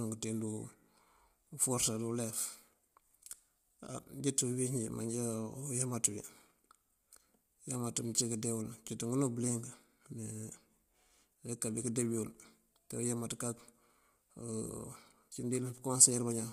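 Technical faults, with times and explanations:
Throughout, low-delay AAC compression: the speech was likely encoded with AAC-ELD, the low-delay codec used in video calls, at a rate that fits around 32 kbps. Its short frames resolve the pitch harmonics of the voice poorly and spend bits fast, so the damage is plainly audible: the speech sounds rough and grainy, with noise filling the gaps between harmonics, and the band stops at 15.6 kHz, with nothing above it.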